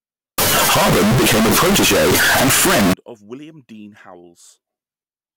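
From 0.38 s to 2.93 s, the speech turns into a loud, harsh buzz. The waveform sits at an almost fixed, high level, almost square, regardless of how quiet the talking was. Background noise rises to the same level as the voice. Pitch stays traceable through the distortion. This is likely a float read as integer fault: 32-bit float samples decoded as 32-bit integers, so sign and exponent bits dominate each value.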